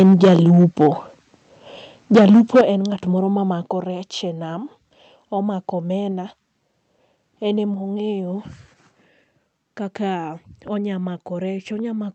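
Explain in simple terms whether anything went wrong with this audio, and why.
The start is harsh and crackly from 0 to 0.88 s, and even rougher from 2.14 to 2.61 s. That's likely microphone overload, with the loudest peaks getting their tops chopped off.

Right after that, at 2.61 s, everything drops sharply in level. It drops again, a bit less, at 3.63 s just before "rech e nam", and a little more at 7.74 s. That's microphone volume stepped down, likely the call software turning the input down after the distortion.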